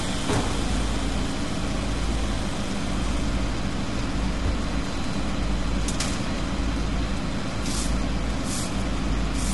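From start to finish the sound has a rough, grainy quality, with a hiss-like fuzz filling the gaps between tones and nothing at all above about 11.6 kHz, so the top end is dull and artificial. That's plainly audible codec damage, likely from low-delay AAC compression (AAC-ELD). Its short frames can't resolve tonal detail finely and spend bits quickly, so at a rate that fits around 32 kbps it runs short and smears noise across the spectrum.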